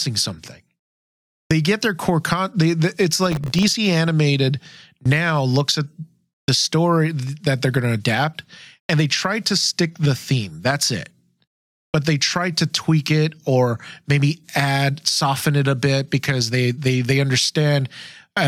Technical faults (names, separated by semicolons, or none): processor overload crackle